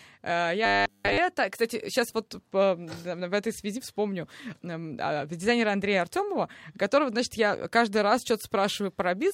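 Speech that turns into a rigid, metallic buzz at 100 Hz from 0.66 to 1.18 s: robotic sound from repeated short buffers, likely from a starved stream looping 10 ms of audio throughout.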